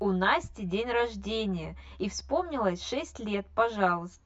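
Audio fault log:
throughout, channel delay (comb filtering): one channel lags about 10 ms, so the mono sum sounds hollow, notched evenly from about 50 Hz; notches stay fixed, unlike flanging.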